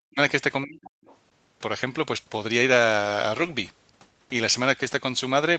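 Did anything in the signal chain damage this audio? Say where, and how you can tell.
Yes. The speech is suppressed in double talk from 0.00 to 0.18 s and from 0.65 to 0.98 s, dropping by around 40 dB. This is likely the call processing's echo canceller, which cannot separate the talker from loudspeaker echo and attenuates both.

The other side's voice is leaking through faintly from 1.03 to 1.17 s, roughly 30 dB below the talker. The echo canceller in the call processing stage likely left residual loudspeaker pickup in the microphone signal.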